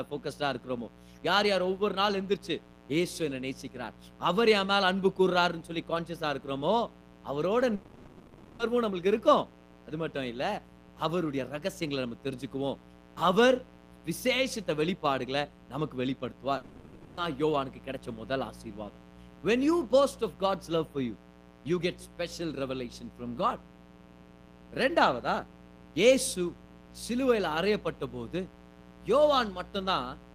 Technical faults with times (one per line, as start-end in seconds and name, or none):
0.00-30.35 mains buzz
7.75-8.62 long network dropout
16.57-17.20 long network dropout